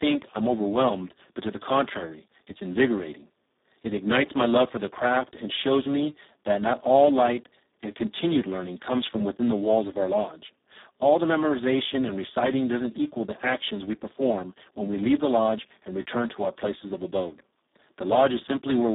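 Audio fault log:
throughout – Speex codec: the speech sounds hoarse, buzzy and close to robotic, since so few bits are left for the excitation that the coder behaves almost like a vocoder, which fits a very low setting around 4 kbps. The band runs roughly 200 Hz to 3.7 kHz. A spectrogram shows blurred, smeared harmonics and a hard ceiling near 3.8 kHz with nothing above, while the waveform looks rough and grainy where voiced sound should be smooth.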